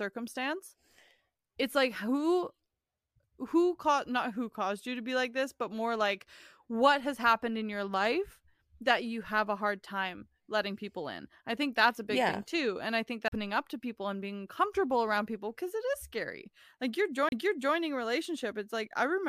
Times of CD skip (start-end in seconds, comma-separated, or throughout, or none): 13.28-13.32, 17.29-17.32